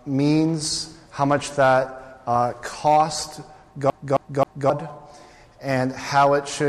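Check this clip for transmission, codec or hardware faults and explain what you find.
One fault stands out: a CD stuck on one turn, from 3.9 to 4.70 s. A scratch on the disc throws the laser back one track at the same point on each rotation. So the same slice of audio plays again instead of moving forward. Here the repeated slice is about 0.27 s long, and it plays three times. A brief mute falls at each jump. The result is a fast, even stutter, the typical sound of a skipping CD.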